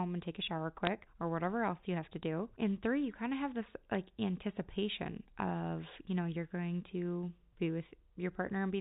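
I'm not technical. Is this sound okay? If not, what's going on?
No. There are two brief bursts of bit errors on a digital phone line: one from 0.85 to 0.87 s, between "and take a shower" and "or whatever else you", and another at 3.95 s, between "kind of have this" and "anticipation of you know". A tiny fraction of the digital data got flipped in transit, and each wrong bit bends a single sample, so you hear sharp little ticks. Unlike a dropout, the speech never goes silent or skips, and the telephone-style sound around the ticks stays the same.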